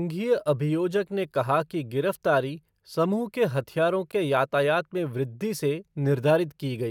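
At 4.12 s the speech drops out for a brief, hard-edged moment of silence, about 13 ms long. This is a gap between stream segments: the timestamps of adjoining segments, which appear to be 6 s long, leave a small hole that the player fills with silence, though no audio is lost.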